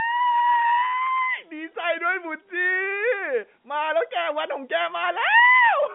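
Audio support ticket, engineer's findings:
No faults found; telephone-band speech, nothing to action.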